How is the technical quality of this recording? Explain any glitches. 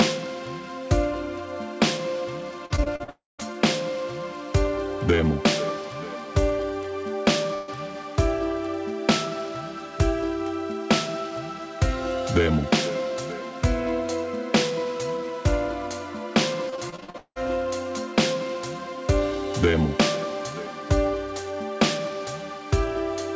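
The recording has several network glitches, clustered around 3 s, at 7.5 s and near 17 s, heard through a call codec whose content stops at 8 kHz.

Repeated packet loss (robotic sound), 2.66 to 3.43 s and 16.70 to 17.38 s: packets kept going missing, and each gap was patched by extending the last sound. This leaves choppy stretches, the later one over half concealed, with one gap near 180 ms.

Long network dropout, 3.10 to 3.54 s: the sound smears into a fading buzz or hiss, then goes silent for about 170 ms, likely because incoming audio stopped and roughly 300 ms was never played.

Burst of packet loss, 7.54 to 7.70 s: about 140 ms of audio failed to arrive in time. The receiver held and faded the preceding sound, then jumped ahead past the missing part.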